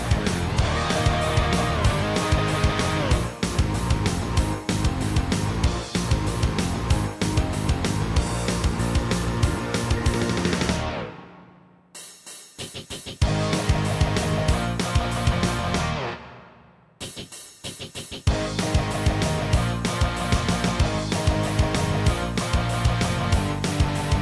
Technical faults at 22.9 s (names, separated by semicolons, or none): none